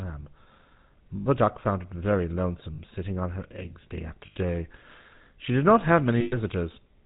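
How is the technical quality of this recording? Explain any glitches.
The recording is limited by a low-rate mobile speech codec throughout, with four short dropouts that have been concealed.

The GSM full-rate codec coloration is plainly audible for the whole clip. The coder models the vocal tract and drives it with a coarsely sampled pulse excitation, consistent with a 13 kbps full-rate stream. It discards everything above 4 kHz. The speech sounds band-limited and dull, with a buzzy, gravelly roughness laid over every voiced sound.

Lost GSM frames occur at 1.16–1.27 s, at 2.74–2.79 s (between "found it very" and "sitting on her eggs"), at 4.26–4.37 s (after "on her eggs day") and at 6.20–6.37 s (after "did not have"). The gaps run roughly 40 to 120 ms, which fits two to six 20 ms frames. In each one the decoder reuses the last good frame's parameters, so the sound hangs as a brief metallic, rough ring.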